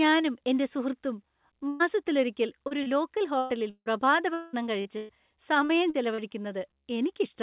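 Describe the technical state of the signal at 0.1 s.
At 0.1 s the audio is intact, with no fault present, only the narrowband character of the call path, which carries nothing above about 4 kHz.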